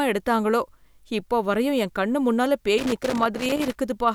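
At 2.78 s, right after "வரையும் என் கண் முன்னால", a loose connector crackle begins and runs to 3.75 s. A worn or dirty contact is making and breaking as it shifts, so the speech is chopped into fragments. The result is an irregular, scratchy burst lasting about a second. Its uneven spacing sets it apart from the steady, periodic clicks of a buffer underrun.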